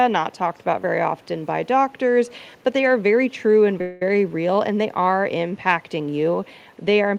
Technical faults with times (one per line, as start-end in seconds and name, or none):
0.32-0.63 echo leak
1.21-1.26 echo leak
3.81-4.02 call audio freeze